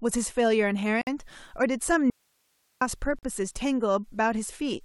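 Speech clip with two faults. Gaps at joins of encoded pieces open at 1.01 s for about 55 ms and at 3.19 s for about 43 ms. Separately encoded pieces were joined untrimmed, so encoder delay and padding remain as short silences. From 2.10 to 2.81 s the speech cuts out abruptly, leaving only hiss roughly 45 dB down. This is likely an audio dropout to a faint residue, with the path still live.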